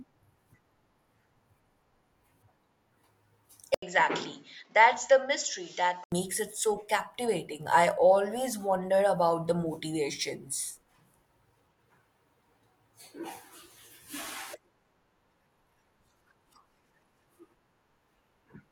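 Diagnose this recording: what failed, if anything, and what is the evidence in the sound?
The capture stage likely switched to a poorer input device from 3.74 to 6.12 s. After an 80 ms silence the speech turns dull, with nothing above 7.6 kHz, about 5 dB quieter, over fresh background noise around 40 dB down, starting at "it so captivating I".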